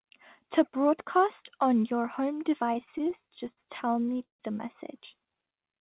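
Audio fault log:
2.74–4.41 s, repeated stalls (stutter): Between "broadcast on your home" and "the message" the sound halts 22 times. Each time packets arrived too late, the buffer ran dry, and the receiver held the last sound going until data resumed. That adds about 0.4 s of filler, roughly a quarter of the span, with the longest hold 156 ms. Nothing drops out, but delivery drags and jerks. On a spectrogram this shows as short smeared, frozen patches repeating the preceding frame. The waveform shows repeated cycles, some fading down in the longer holds.
5.20–5.80 s, jitter buffer slow-down: After "the message" the ending runs at about 86% speed with pitch unchanged, stretched by 93 ms. The buffer was building a reserve by repeating single pitch periods and slices of pauses over and over, so sounds are drawn out. On a spectrogram, harmonics stay at the same height but stretch sideways. 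In the waveform, near-identical periods repeat back to back. Throughout, nothing sits above 4 kHz, which points to a narrowband telephone codec such as G.711.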